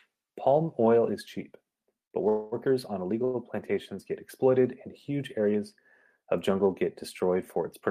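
At 2.05 s a short stall from a late packet occurs. A packet arrived late and the jitter buffer ran empty. The last sound is stretched for about 51 ms with a slight buzz or dip, then resumes at 2.14 s. Nothing is lost.

From 2.29 to 2.69 s there is a call audio freeze. The sound turns into a held, fading buzz or hiss for roughly 233 ms. It never drops to silence. Delayed packets likely emptied the buffer. Playback then continues from the same point.

At 3.25 s another short stall stretches the sound for about 94 ms, ending at 3.37 s.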